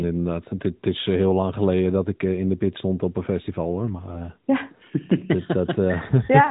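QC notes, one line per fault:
The speech sits within the 4 kHz band of a narrowband mobile codec path working as expected, with no faults heard anywhere in the signal.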